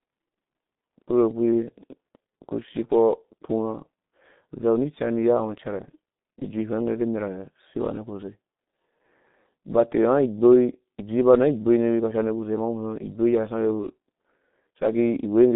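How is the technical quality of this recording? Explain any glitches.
The speech sounds muffled and hoarse throughout, with consonants smeared and no brightness above about 3.8 kHz. This is G.723.1 codec damage, and it is heavy. The codec keeps only a narrow telephone band, roughly 150 Hz to 3.7 kHz, and rebuilds the voice from a coarse model refreshed only every 30 ms frame. That slow refresh blurs quick transitions, which fits a bitrate of around 6 kbit/s.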